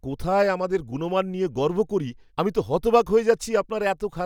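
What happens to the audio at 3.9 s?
Nothing goes wrong at 3.9 s: the speech continues cleanly with no dropout, click or distortion.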